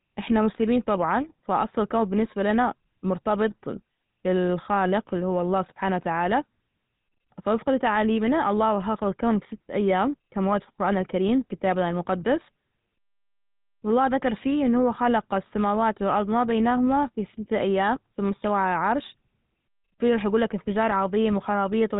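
Speech passed through the GSM full-rate codec for its whole length. The codec rebuilds the voice from a vocal-tract model driven by sparse, regularly spaced excitation pulses, leaving plainly audible buzzy, gravelly roughness and nothing above 3.8 kHz, consistent with a 13 kbps mobile link.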